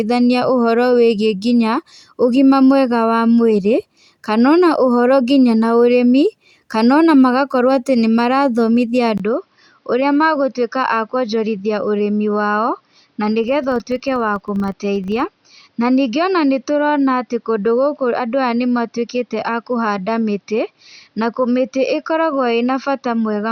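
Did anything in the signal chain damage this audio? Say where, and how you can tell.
Yes. At 9.18 s the sound drops out for about 20 ms, then returns duller and about 5 dB quieter, with a new noise floor roughly 45 dB down, lasting to the end. This likely reflects the driver switching the input to a poorer device.

From 13.44 s to 15.60 s there is a 25 Hz buzz that rises and falls with the signal's level. This points to a filter restarted on every block in the buffer stage: it resets its state each 40 ms block, and each restart adds a small transient.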